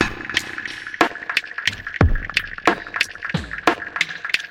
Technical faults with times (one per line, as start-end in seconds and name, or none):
none